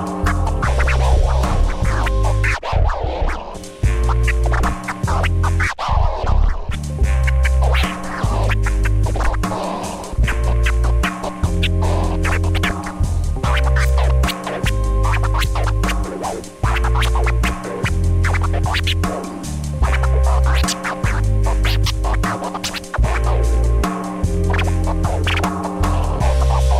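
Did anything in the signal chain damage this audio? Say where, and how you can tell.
No, no signal-chain damage heard.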